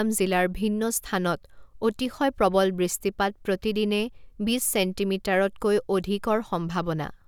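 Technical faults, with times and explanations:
No technical faults detected in the speech recording.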